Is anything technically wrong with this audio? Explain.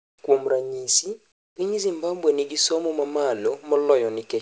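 Yes. Comfort noise in place of the background appears twice, from 0.00 to 0.18 s and from 1.32 to 1.56 s. The likely cause is discontinuous transmission: the sender's voice detector judged these gaps silent and stopped sending audio, so the receiver synthesised a noise fill. The real background detail vanishes, replaced by a flat, featureless hiss about 20 dB quieter, which then snaps back when the sound resumes. The call codec's band limit at 8 kHz runs throughout.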